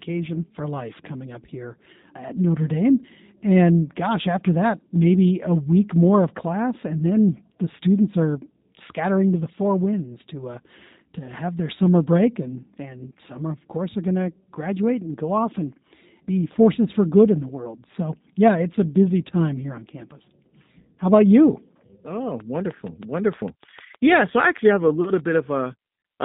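Throughout, the speech carries plainly audible G.729 codec damage. The 8 kbit/s coder rebuilds each 10 ms frame from a vocal tract filter, a pitch predictor and a few pulses, so nothing above 4 kHz survives and voices sound rough and slightly synthetic. This constant band-limited roughness sets it apart from a passing glitch.

From 10.14 to 10.18 s, between "scattering to the four" and "to uh to have", there is VoIP packet loss concealed by the speech codec. The gap fits a single lost 10 ms frame. The decoder extends the last pitch and filter into a brief buzzy smear and then recovers weakly. It sounds smooth and tonal rather than like a hard dropout to silence.

From 22.40 to 25.36 s, a train of clicks ticks at a regular pace of about 6.5 per second, about twenty in all, with peaks about 5 dB above the speech. The clicks keep going through pauses. Their identical shape and steady spacing point to interference from nearby equipment or a struggling interface as the likely cause, not to anything in the codec.

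Inside that stretch, from 24.32 to 24.34 s, a second concealed packet loss of one 10 ms frame produces another short buzzy extension. Unlike the sharp, identical ticks around it, it smears the speech itself.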